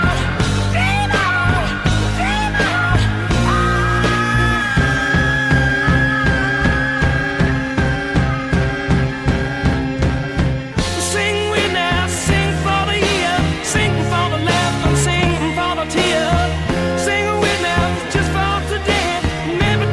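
No faults can be heard anywhere in the recording.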